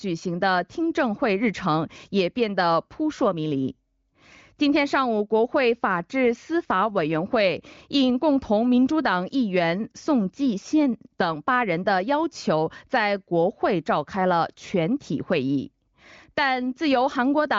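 Speech over the AMR wideband (HD Voice) codec at 23.05 kbit/s, with nothing above 7.5 kHz as that path dictates, and no technical fault to report.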